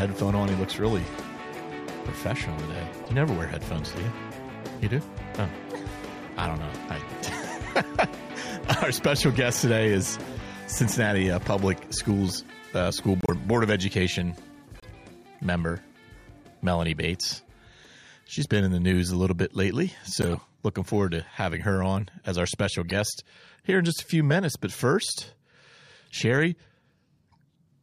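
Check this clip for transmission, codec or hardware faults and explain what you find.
Five bursts of corrupt frame decoding occur, at 3.04–3.07 s, 13.21–13.30 s, 14.80–14.85 s, 20.22–20.34 s and 22.89–22.92 s. Damaged compressed frames were played anyway. Misread gains and codes scatter energy wrongly, giving brief chirps and noisy blips. The longest burst, near 20.2 s, spans several frames.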